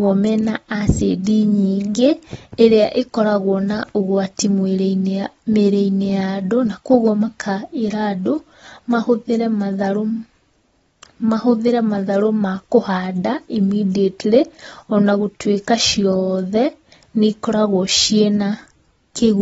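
From start to finish the speech sounds dull and smeared, with nothing above about 7.6 kHz and a warbly, fizzy edge on sibilants. That's likely AAC compression, with the encoder dropping the top end and thinning bands to fit what sounds like roughly 24 kbps.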